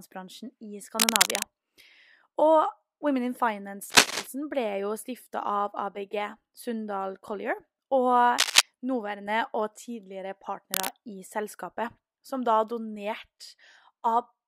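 Four bursts of cable scratch noise sit over the speech, at 0.99 to 1.47 s, 3.90 to 4.27 s, 8.38 to 8.61 s and 10.71 to 10.88 s. Each is a dense, ragged rustle. The first three are a bit louder than the voice, and the last is about level with it. That uneven crackle likely comes from a worn cable or connector being moved, with its contact resistance jumping around rapidly.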